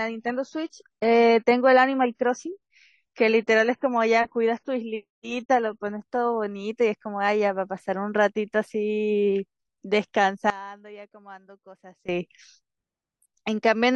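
From 0.0 to 6.0 s the adaptive stream is starting at a low bitrate. Nothing is present above 9.2 kHz, with a flat ceiling on the spectrogram and smeared codec artefacts, which fits a low-bitrate AAC rendition. At 6.0 s the player steps up, and the band edge jumps upward with no gap.

From 10.5 to 12.09 s the speech drops by about 19 dB to a faint copy. The waveform shrinks sharply. The likely cause is one channel inverted, so the shared centre cancels when summed to mono.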